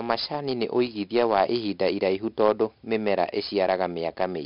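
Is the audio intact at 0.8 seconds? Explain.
No. Throughout the speech, including at 0.8 s, 4-bit ADPCM compression codes each sample as a coarse step from a prediction, heavily enough to suggest roughly 44 kbps. The error rides the voice as gritty hiss, attacks distort, and nothing remains above 5.3 kHz.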